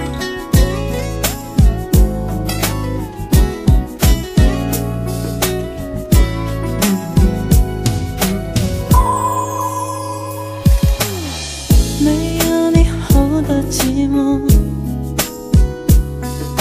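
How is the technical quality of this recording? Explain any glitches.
No technical faults can be heard anywhere in the recording, and the signal stays steady and intact throughout with nothing that needs explaining.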